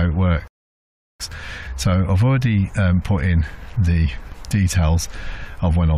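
At 0.48 s the sound stops dead and stays silent until 1.20 s, a rebuffering stall that adds about 0.72 s of playback time. The player exhausted its downloaded audio and paused until more data arrived. What sets this apart from a dropout or lost packet is that nothing is missing: when playback returns, it picks up at exactly the point where it halted, so the gap inserts silence rather than cutting anything out.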